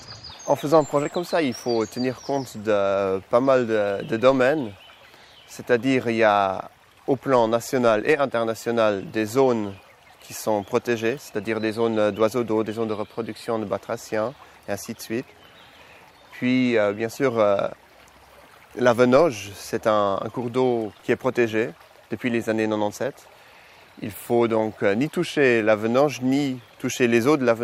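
Short concealed packet loss at 1.03 to 1.07 s: about 20 ms of the audio never arrived in time, so the receiver covered the gap by extending the preceding sound for roughly 15 ms before crossfading back, leaving a brief smear or wobble.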